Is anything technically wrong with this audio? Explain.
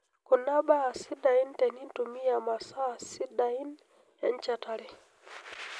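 No technical faults are audible.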